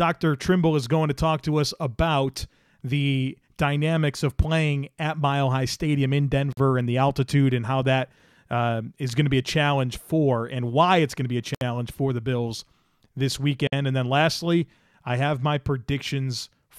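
At 6.53, 11.55 and 13.67 s the speech drops out for about 47, 66 and 54 ms. Each is a gap at a join of encoded pieces. Separately encoded sections were joined untrimmed, leaving encoder delay and end padding. The silences have smeared edges.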